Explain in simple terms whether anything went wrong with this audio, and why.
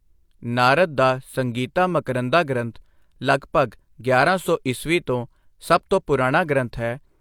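Nothing went wrong with this speech recording.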